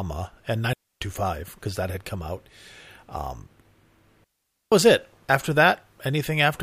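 Speech with two clean holes of near silence and no noise burst: 0.73 to 1.01 s, just before "because that had come", and 4.24 to 4.72 s, before "was it". These are digital wireless dropouts, where the receiver lost too much data and muted briefly.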